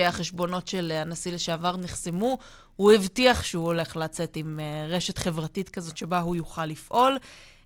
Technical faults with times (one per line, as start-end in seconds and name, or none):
0.00-7.66 filter restarted on every block